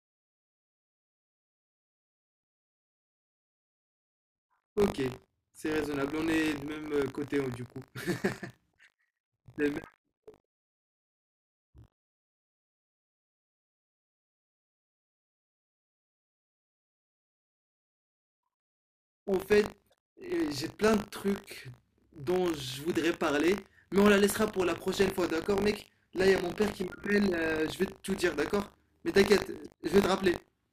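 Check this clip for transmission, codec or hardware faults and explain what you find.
The speech carries one fault, buffer tearing, throughout the clip. The writer and the hardware reader of the ring buffer have slipped, so each 20 ms period splices in a small sliver of audio about 70 ms stale with hard joins, producing a robotic 50 Hz buzz wherever speech is present.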